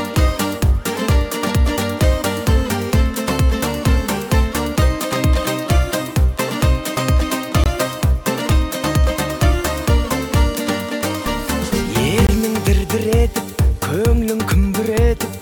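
At 7.64 to 7.66 s and again at 12.27 to 12.29 s, the audio drops into a block of digital silence about 21 ms long, which fits a 1024-sample buffer left unfilled in time. Each gap starts and ends abruptly, so it comes across as a short hole rather than a single tick. Unlike a dropout patched by concealment, nothing is repeated or smeared. The signal simply stops dead and resumes.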